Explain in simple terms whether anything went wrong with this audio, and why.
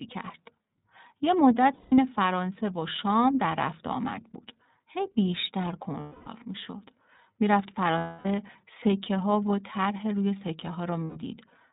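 The whole clip went through the iLBC codec, a phone-call codec. It cuts off all sound above 4 kHz, so speech sounds muffled, rough and slightly synthetic.

There are also lost iLBC frames at 1.73 to 1.98 s, 6.00 to 6.28 s, 7.98 to 8.26 s and 11.04 to 11.17 s. Pieces of the signal went missing. The decoder filled each gap with a held, buzzy sound, then recovered almost immediately.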